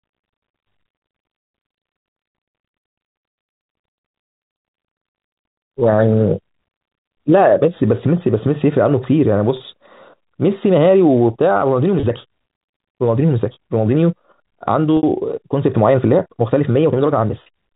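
Packet loss with pitch repetition at 9.57–9.60 s, 12.00–12.03 s, 14.97–15.03 s and 17.43–17.46 s in this telephone speech: the receiver fills each roughly 30 ms gap (60 ms at 14.97 s, two packets) by repeating the last pitch period, giving a brief held, buzzy tone. A time-stretched section runs from 10.68 s to the end: the pace jumps to about 1.47 times faster at unchanged pitch, sounding rushed, likely from software dropping short pieces to fit a length. Throughout, the band stops at 4 kHz, consistent with the G.711 mu-law phone coding.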